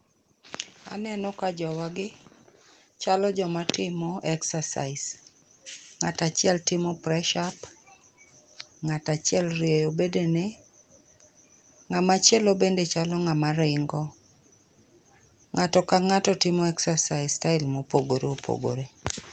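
Automatic gain rising at 0.95–2.06 s (about 4 dB) and 3.04–5.1 s (about 7 dB): speech and background swell together gradually, not in a sudden jump.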